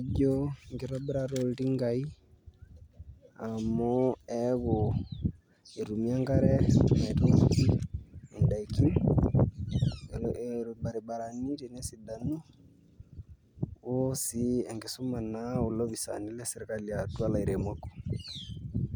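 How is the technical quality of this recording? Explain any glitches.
One glitch stands out near the end of the speech. A DC step at 17.19 s, just after "olopisaani lesirkali", shifts the waveform's zero line abruptly. The offset then drains away through a high-pass around 5 Hz, so the jump sounds as a brief low thump while the speech carries on unaffected.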